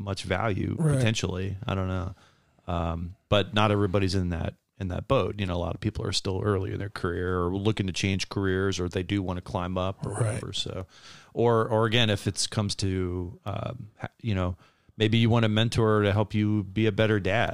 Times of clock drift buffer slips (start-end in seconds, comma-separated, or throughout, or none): 0.14-17.48